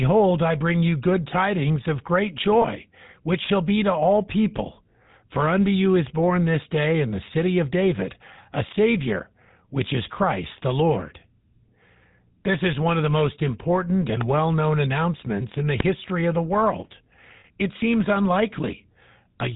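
From start to finish the speech carries GSM full-rate codec damage: a buzzy, gravelly roughness from pulse-driven vocal-tract modelling at a rate consistent with 13 kbps. A spectrogram shows nothing above 4 kHz and coarse, smeared harmonics below it.

Lost GSM frames appear at 2.62 to 2.65 s, between "good tidings of great" and "which shall be to", and at 17.40 to 17.45 s, after "of the world". The previous frame's settings repeat, heard as a brief metallic ring. These gaps last about 20 and 40 ms, which fits one and two dropped frames. In the waveform each looks like a short repeated segment.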